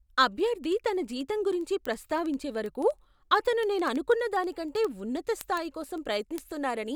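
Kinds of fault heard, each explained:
Word clock ticks: the speech arrives over a digital link read by a receiver not locked to the sender's clock, with a mismatch of a few hundred ppm. Each time the clocks slip, one sample is dropped or repeated, producing roughly a hundred ticks at a steady rate of about one every 70 ms from 0.16 s to the end. On a spectrogram they form evenly spaced thin vertical lines. The waveform shows tiny single-sample steps.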